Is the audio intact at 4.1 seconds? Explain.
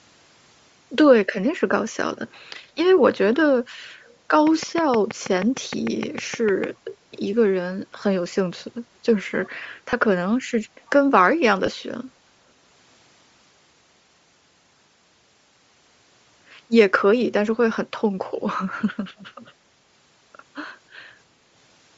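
No. From 4.05 to 4.14 s a very faint, short scrap of the speech returns about 322 ms late, fleeting beneath the main signal. This is likely an echo leak: a far end playing the call on a loudspeaker whose echo canceller let some of its microphone pickup slip back.

Under that moment, as throughout, the speech carries a breathy, grainy edge with a plainly audible noise-filled upper band. That points to Bluetooth LC3 compression at around 32 kbps with 10 ms frames, likely zeroing much of the upper spectrum and refilling it with noise.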